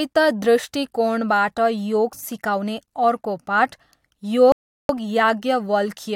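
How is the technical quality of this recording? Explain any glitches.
The speech has one glitch, a playback interruption about three-quarters of the way through.

A rebuffering stall runs from 4.52 s to 4.89 s. The player used up the audio it had already downloaded and had to wait for more data before continuing. The speech drops abruptly to silence for about 370 ms, then picks up at exactly the point where it broke off. No sound is skipped, but that gap stretches the timing of the speech.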